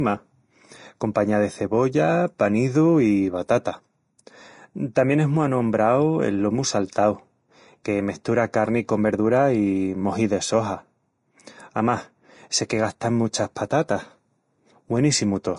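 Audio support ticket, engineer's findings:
Vorbis compression, likely, throughout the speech: treble hissy and grainy, tones roughened, attacks blurred. Spectrogram shows hard ceiling at 10.6 kHz, noisy smeared upper band. Fits a low bitrate around 32 kbps.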